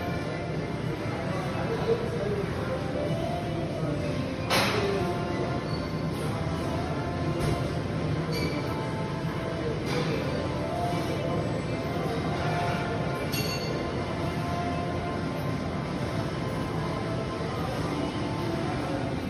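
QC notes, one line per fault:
15.44 to 19.29 s, crude rate conversion: from here to the end there's a gritty, inharmonic fizz riding along with the louder and brighter parts of the sound, sitting very roughly 45 dB under it. That points to a 48 kHz to 44.1 kHz conversion done by straight linear interpolation with no proper filtering. The resulting error repeats in a pattern tied to the two rates, so it produces shifted, inharmonic copies of the actual material.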